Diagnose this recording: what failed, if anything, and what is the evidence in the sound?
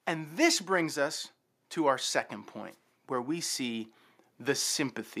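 The failure is automatic gain rising, in the call processing stage. From 0.05 s to 3.93 s the level climbs steadily by about 6 dB. Speech and background swell together. The gain control judged the input too quiet and raised its gain gradually.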